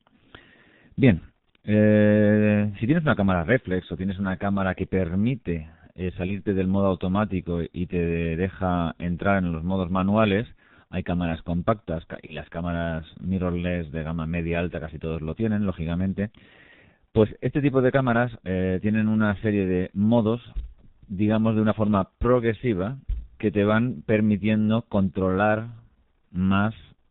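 Throughout, the G.723.1 codec leaves the speech muffled and hoarse, with smeared consonants. Its low bitrate fits the 6.3 kbit/s mode, and a spectrogram shows an empty band above 4 kHz.

At 6.26–6.42 s and 12.26–12.36 s, VoIP packet loss concealed by the speech codec stretches the last sound into a buzzy tone or coloured noise that fades. A spectrogram shows a frozen spectrum and the waveform a decaying envelope, which fits one lost 30 ms frame each time.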